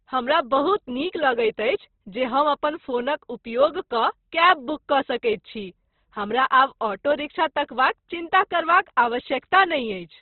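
Across the whole speech clip the audio is cut off sharply, with nothing above about 4.1 kHz, and the speech sounds rough and grainy rather than swirly. This is likely Opus compression in its CELT mode, with the encoder narrowed to narrowband and starved of bits. The heavy damage fits a rate near 12 kbps. Where bands lack bits, the codec fills them with folded or noise-like energy, so detail turns coarse and hissy instead of dropping out.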